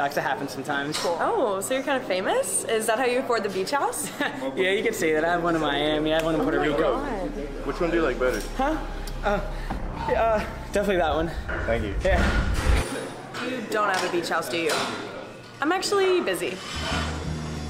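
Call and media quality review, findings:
No technical faults heard in the signal path; level, continuity and bandwidth show no audible defect anywhere in the recording.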